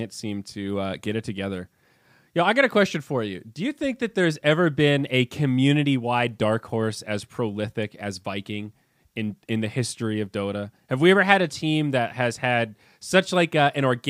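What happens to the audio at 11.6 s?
Nothing goes wrong at 11.6 s; the speech there plays through intact, with no dropout, click, distortion or other fault.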